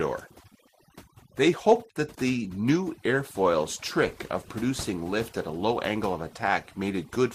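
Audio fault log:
Throughout: overdone noise removal. The noise reduction on this speech recording was set too aggressively, so individual frequency bands that sit close to its noise estimate are pulled far down or cut out entirely, and the softer components of the voice are removed along with the noise. Between phrases the background collapses to near silence scattered with twinkling specks.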